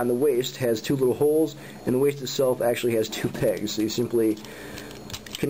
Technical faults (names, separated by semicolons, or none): none